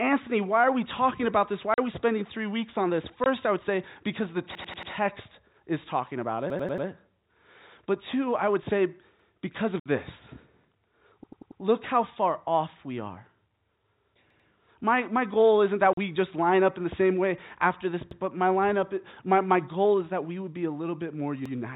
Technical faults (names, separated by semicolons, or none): packet loss filled with silence; repeated buffer